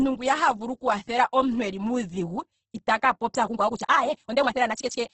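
From the start the speech sounds grainy and rough, with nothing above 8.2 kHz, which fits heavy Opus compression, likely in its CELT mode at roughly 12 kbps. After "eli muudhigu itaka popya", at 3.44 s, the pace jumps to about 1.76 times faster with unchanged pitch, rushed through to the end, likely a time-stretched section.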